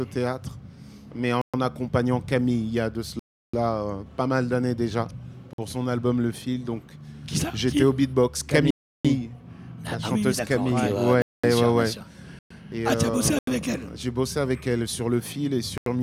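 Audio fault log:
1.42–15.86 s, block of digital silence: the sound drops abruptly to silence eight times, at 1.42–1.54 s (about 120 ms), 3.19–3.54 s (340 ms), 5.53–5.58 s (50 ms), 8.71–9.05 s (340 ms), 11.22–11.44 s (215 ms), 12.39–12.50 s (115 ms), 13.39–13.47 s (85 ms) and 15.78–15.86 s (85 ms). The shortest sound like a pop, and the longest like a clear hole.
Each gap has hard edges with no fade. The two 340 ms gaps match a 16384-sample block, and the two 85 ms gaps match a 4096-sample block, both at 48 kHz. This points to output buffers that were not filled in time.
In the waveform, each gap appears as a flat line. On a spectrogram, each shows as a blank vertical band bordered by thin broadband streaks.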